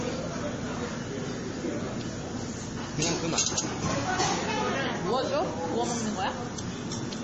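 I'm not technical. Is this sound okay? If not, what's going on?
No. Across the whole clip the sound is dull, with nothing above about 8.3 kHz, and watery, swirling, likely from heavy MP3 compression, not just muffling.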